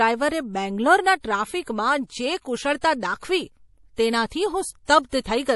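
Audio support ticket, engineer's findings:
Watery, swirly texture across the whole speech clip, s sounds chirpy and metallic, nothing above 11.5 kHz. Likely cause: MP3 compression at a low bitrate, with damage consistent with around 48 kbps.

Mechanism: starved encoder drops the treble at a fixed cut-off and zeroes weak frequency lines, which then flicker on and off between frames, giving the swirl and smeared consonant attacks.

Short hiss just ahead of sharp onsets, attack soft and blurred, at 1.21–1.24 s, 2.81–2.83 s, 4.26–4.31 s, 4.85–4.89 s and 5.09–5.13 s. Spread from 26 to 51 ms. Component: same transform codec.

Pre-echo mechanism: quantisation noise spread across a whole block. The onset sits late in the block, so noise sized for the loud part leaks into the quiet lead-in.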